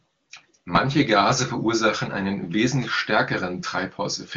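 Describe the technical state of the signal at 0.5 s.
At 0.5 s the speech is intact, carried by the AMR wideband (HD Voice) codec at 23.85 kbit/s, a rate high enough that its coding leaves at most faint traces.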